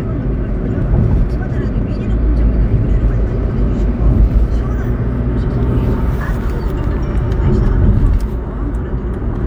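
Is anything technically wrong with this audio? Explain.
Yes. From 0.65 to 0.67 s there is a corrupt frame decoded. Flipped bits in a few compressed frames were played anyway. Misread gains and codes put energy at wrong frequencies. It sounds like a short chirpy blip, peaking around -20 dBFS.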